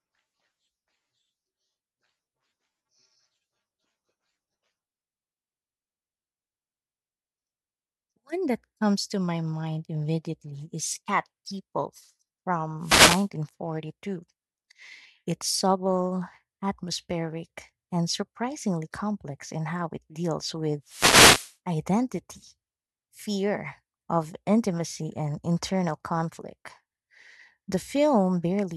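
At 12.81 to 13.28 s, and again from 20.85 to 21.55 s right after "in how it deals", there's a wireless microphone noise hit. The radio link fades as reflections cancel, so receiver noise surges into a short swish of static over the speech.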